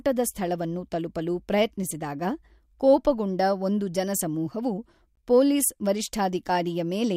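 This speech clip has a gap at a join of encoded pieces at 5.16 s, just after "ಕೋಪಗೊಂಡ ಒಂದು ಜನಸಮೂಹವು". A silence of about 17 ms cuts into continuous speech with smeared edges, then the speech resumes where it stopped. Separately encoded pieces were joined without trimming their encoder delay and end padding.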